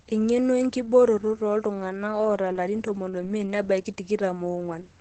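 Opus voice compression runs throughout: nothing above 8.5 kHz, and a hoarse, slightly robotic grain that plain low-pass filtering lacks, fitting SILK near 12 kbps.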